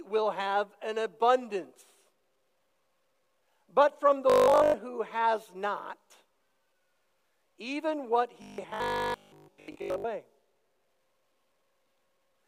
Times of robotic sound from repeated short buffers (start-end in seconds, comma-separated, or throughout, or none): 4.30-4.74, 8.42-10.04